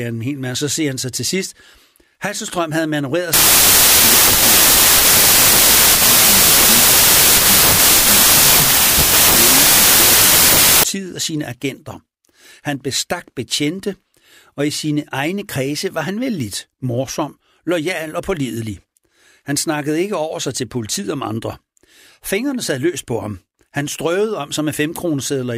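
From 3.33 s to 10.83 s the speech turns into loud, harsh noise, with the original buried faintly underneath. It is a wrong sample width fault. Audio stored as packed 24-bit samples is being read as 16-bit, so most values are built from mismatched bytes. Only some keep the true top bits. Because each 24-bit sample is split into 16-bit reads, what survives of the speech plays at about 0.67 times its speed and pitch. Plain clipping or dropout would keep the timing. Here the speech is slowed and lowered, under a wall of noise.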